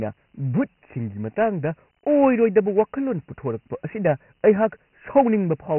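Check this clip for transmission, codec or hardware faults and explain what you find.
One codec fault runs through the whole speech recording: Dialogic VOX ADPCM, the 4-bit adaptive differential coding used for phone menus and voicemail files. Each sample is stored only as a small step relative to a prediction, at a rate that fits 6,000 samples a second and about 24 kbps. Nothing survives above 3 kHz, so the speech sounds narrow and boxy, and the heavy quantisation leaves a gritty hiss that tracks the speech from start to finish.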